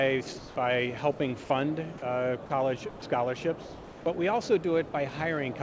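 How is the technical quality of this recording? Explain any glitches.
The recording has repeated short dropouts: sound dropped by the voice detector at 0.38–0.56, 1.18–1.20, 1.44–1.50, 1.98–2.02, 2.46–2.50, 2.90–3.02, 3.62–4.06 and 4.92–4.94 s. Each time, the sound briefly gives way to flat synthetic noise, then returns. The likely cause is the sender's detector misjudging quiet passages as background and halting transmission while the receiver filled in comfort noise. The longest gap is about 440 ms near 3.6 s. Nothing above 8 kHz is present, which fits a wideband call codec such as G.722.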